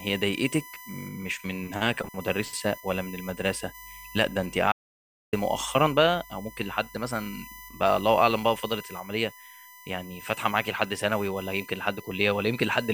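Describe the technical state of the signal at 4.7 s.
At 4.72 s the speech cuts off abruptly into silence, with no room tone at all, until it resumes at 5.33 s, so about 0.61 s of audio is simply gone. This is an audio dropout to silence, likely from the input link or device briefly failing while the recorder kept writing silence.

Running through that moment, as through the whole recording, is a steady high whine fixed at 1 kHz, strongest at its 2 kHz harmonic, sitting roughly 20 dB below the speech. This is USB whine: current drawn in the bus's 1 ms frames leaks into the audio through the shared power or ground.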